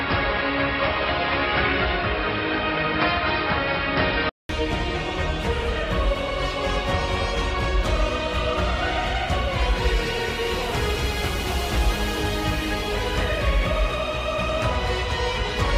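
From the start to 4.49 s the sound is dull and boxy, with nothing above 5.4 kHz and a background noise roughly 35 dB down. At 4.49 s it clears after a 200 ms silence, likely an input switched to a poorer device, unlike steady filtering.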